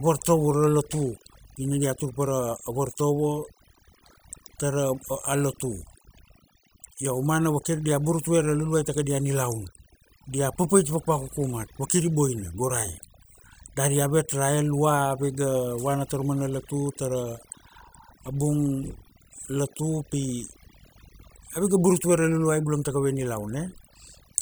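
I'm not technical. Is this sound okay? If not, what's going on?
No. Overdone noise removal runs through the whole clip: a cleanup tool set too aggressively shuts off any pitch range it mistakes for hiss, taking quiet parts of the speech with it. Pauses drop to near silence with twinkling, warbling specks.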